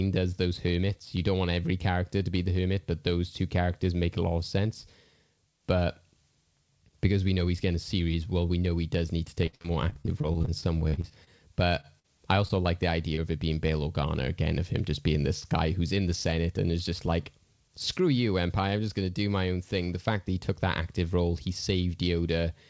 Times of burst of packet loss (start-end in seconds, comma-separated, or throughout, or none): 11.99-12.06